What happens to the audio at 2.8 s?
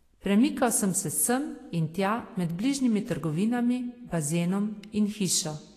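At 2.8 s the speech shows plainly audible damage that runs through the whole clip, likely from Vorbis compression. Nothing sounds above 14.2 kHz. Below that cut-off, the codec has quantised the treble residue so coarsely over its smooth spectral floor that fine detail turns into noise of similar energy. The result is a hissy, grainy top end, roughened tones and softened attacks, which fits a low bitrate of around 34 kbps.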